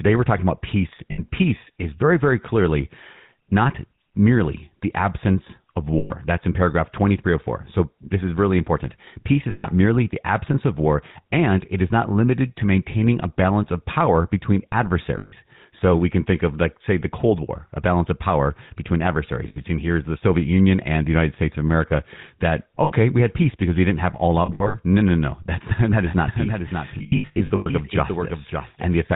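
The whole clip runs through the GSM full-rate codec, and the damage is plainly audible. The speech has that buzzy, gravelly roughness from the coarse pulse excitation, with nothing getting through above 4 kHz. The bitrate sounds like the 13 kbps full-rate mode.

Lost GSM frames show up as short metallic rings, where the last good sound is held. They fall at 1.12 s (60 ms), at 5.98 s right after "merely the absence of" (120 ms), and at 9.5 s just before "merely the absence of" (140 ms). Then come 15.18 s (140 ms), 19.48 s between "of power between adversaries" and "here's the" (80 ms), and 22.84 s (60 ms). At 24.46 s, 160 ms of loss is scattered over about 0.28 s, in runs no longer than about 70 ms.

From 26.07 s to the end there's a doubled audio track. A full-band copy, about 5 dB quieter, trails roughly half a second behind. It has no room colour and cuts in abruptly, likely from a second, slower capture path.

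Inside that doubled stretch, from 26.98 s to 27.68 s, more lost GSM frames pile up. About 460 ms goes missing in patches, the longest around a tenth of a second, so the ringing comes in repeated bursts.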